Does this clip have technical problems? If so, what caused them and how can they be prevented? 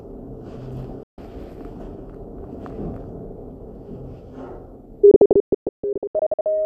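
Yes. Digital broadcast dropout: the receiver lost frames and muted, with 3 ms fades, for 0.15 s at 1.03 s, then in scattered holes from 5.11 to 6.46 s. A stronger signal or better antenna placement prevents it.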